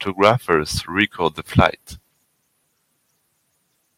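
At 0.23 to 0.31 s, and again at 1.58 to 1.66 s, the speech crackles harshly: microphone overload, with peaks flattened about 7 dB and about 4 dB past the converter's limit, a few percent of samples clipped. The input gain was likely set too high.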